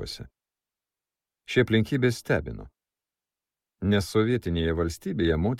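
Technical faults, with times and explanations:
2.66 to 5.59 s, periodic clock jitter: from this point to the end, the converter's sampling clock is being pushed back and forth at a steady rate of around 100 Hz, so samples land slightly early, then slightly late, in a repeating cycle. That timing wobble puts copies above and below every component of the sound, spaced by that same rate and stronger on the higher-frequency content. The result is a rough or metallic edge riding on the sound, which disappears whenever the audio falls silent.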